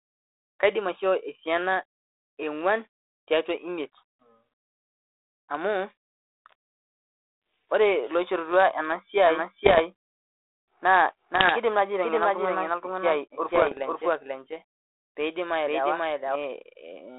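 From 9.19 to 16.35 s a doubled audio track runs: a second, equally loud, full-band copy trails about half a second behind, likely from a slower capture path, and starts and stops abruptly with no decay or room colour, unlike an acoustic echo.

Within that stretch, bit errors on an ADPCM link strike at 9.65–9.81 s, 11.34–11.53 s and 13.48–13.79 s, at error rates of about 1%, 0.7% and 0.5%. Each flipped bit upsets the decoder's adaptation, so instead of a lone click you hear pops trailing into rough bursts with brief level jumps, over the band-limited 32 kbit/s G.726 sound.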